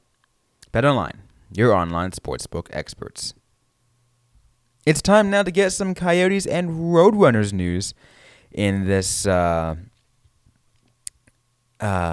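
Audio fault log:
No fault to log.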